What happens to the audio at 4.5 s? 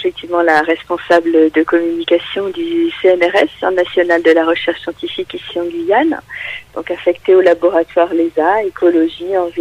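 Nothing goes wrong at 4.5 s; the audio plays through that point intact, with no dropout, click or distortion.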